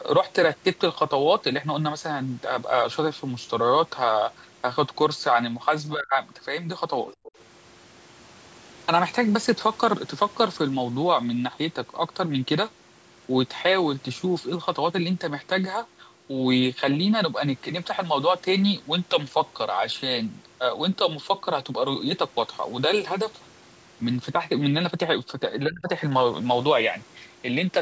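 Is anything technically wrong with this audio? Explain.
Yes. Speech suppressed in double talk occurs at 5.94–6.12 s, 7.22–7.29 s and 25.67–25.89 s. When both sides spoke at once, the echo canceller likely could not separate the talker from the loudspeaker echo, so it pulled both down. The talker's speech sinks by roughly 25 to 30 dB and nearly drops out for a moment each time.

Other side's voice leaking through appears at 7.09–7.15 s. The echo canceller likely failed to strip all of the loudspeaker playback from the microphone signal. A brief, faint scrap of a second voice, about 25 dB below the talker, slips through just before the next dip.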